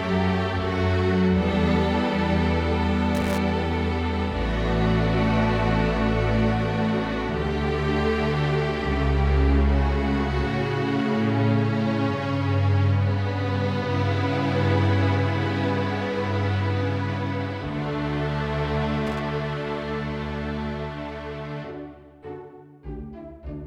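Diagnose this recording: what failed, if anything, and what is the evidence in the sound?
Loose connector crackle, from 3.15 to 3.38 s and again from 19.07 to 19.20 s, places the failure in the analogue wiring. Each burst is a short, irregular scratch and crackle of about 0.23 s and 0.13 s, not a steady tone or a regular click train. A worn or dirty contact is making and breaking as the cable or plug shifts, chopping the signal on and off, with the pops coming from any DC on the line at each break.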